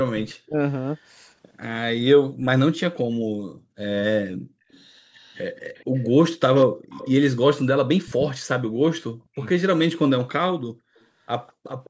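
Twice the speech sinks almost to nothing in pieces, from 0.12 to 0.59 s and from 8.85 to 9.41 s, each time losing roughly 400 ms of sound and dropping by as much as about 40 dB. That is speech suppressed in double talk: the far side was likely talking at the same moment, and the call's echo canceller, unable to tell the local talker from its own loudspeaker echo, pulled both down together. Separately, a faint delayed copy of the voice trails about 206 ms behind. It appears as brief scraps at 0.29 to 0.34 s and 0.95 to 1.0 s, sitting about 30 and 40 dB below the speech, then as a longer, stronger stretch from 4.71 to 7.11 s at about 20 dB down, and again from 10.96 s to the end at about 30 dB down. This is likely echo leak, where one end is on a loudspeaker and its canceller failed to remove everything the microphone caught, so that residue was sent back. The audio's band stops at 8 kHz, as the call's microphone processing normally leaves it.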